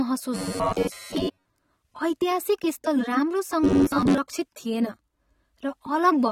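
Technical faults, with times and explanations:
Throughout, AAC compression: dull, smeared speech with no content above 16.5 kHz, likely from AAC-LC quantising coarsely at a low bitrate around 32 kbps.
0.35–1.46 s and 3.64–4.19 s, robotic sound from repeated short buffers: a rigid metallic buzz near 93.8 Hz, total in the first stretch and partial in the second, likely from a roughly 10.7 ms buffer repeating.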